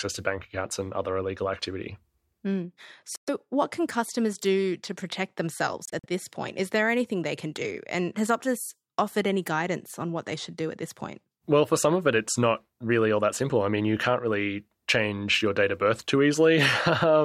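At 3.16 s the speech cuts to silence for about 116 ms. From 5.85 to 6.06 s it breaks into brief gaps, the longest 46 ms. Both are Bluetooth dropouts, likely from late packets being discarded. A waveform shows flat, sharp-edged holes, a spectrogram shows blank vertical bands, and the speech resumes further along.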